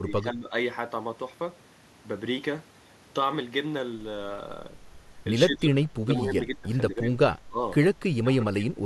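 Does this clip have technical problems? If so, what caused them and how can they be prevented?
Yes. The echo canceller likely could not tell the local talker from loudspeaker echo while both sides spoke, so it turned everything down. This speech suppressed in double talk makes the speech dip by roughly 10 to 25 dB at 0.0–0.53, 5.47–6.69, 6.89–7.18, 7.46–7.6 and 8.23–8.81 s. A canceller with more reliable double-talk detection, which keeps near-end speech open while the far end is active, would prevent it.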